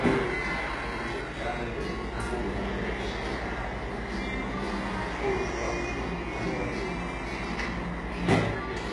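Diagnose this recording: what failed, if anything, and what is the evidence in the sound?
The failure is at the codec stage, and it is likely HE-AAC compression, heavily damaged throughout. Nothing reaches above 11.4 kHz, and the upper band sounds gritty and metallic: treble copied upward from lower bands rather than coded, which points to a bitrate near 12 kbps.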